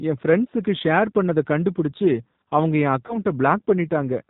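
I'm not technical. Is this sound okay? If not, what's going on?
No. The speech passed through the G.729 codec, a low-quality phone-call format. It cuts off high sounds, so voices sound muffled, rough and slightly robotic throughout.

Around 3.07 to 3.16 s, just after "பண்ணத கண்டுபுடிச்சு அவங்க என்", there is VoIP packet loss concealed by the speech codec. About 20 ms of audio went missing, which fits a single lost packet. The system guessed the gap, leaving a brief smear that fades before the voice recovered.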